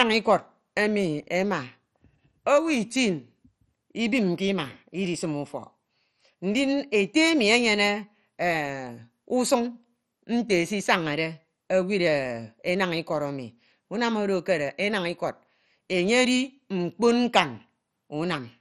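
Throughout, the speech sounds dull and gurgling, with nothing above 13.7 kHz; this is likely MP2 compression, its heavy damage pointing to a starved bitrate around 56 kbps.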